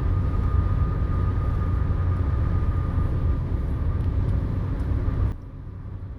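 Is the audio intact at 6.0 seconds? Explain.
No. At 6.0 s the audio is inside a sudden gain jump that begins at 5.32 s and lasts to the end: sound and background noise drop together by about 12 dB in one step, likely a gain change applied without a ramp. Unlike a fade, there is no gradual slope, and unlike a dropout, the sound stays present at the lower level.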